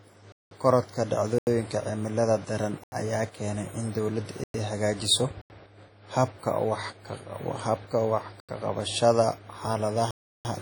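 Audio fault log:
throughout: WMA compression, likely the cause of the heavy ringing, washy smearing and hiss that breathes with the speech. The long transform blocks spread quantisation noise over tens of milliseconds, and weak lines are zeroed, which points to a low bitrate around 32 kbps. A spectrogram shows patchy, holed partials and nothing above 19.9 kHz.
0.32 to 0.51 s, 1.38 s, 2.84 s, 4.44 s, 5.41 s, 8.40 s, 10.11 to 10.45 s: block of digital silence. Each gap cuts abruptly to silence with no fade. The 85 ms gaps fit a 4096-sample buffer at 48 kHz that was not filled in time. The other gaps last 190 ms, 105 ms and 341 ms, and the last of these fits 16384 samples. On the waveform they are flat lines, and on the spectrogram they are blank vertical bands.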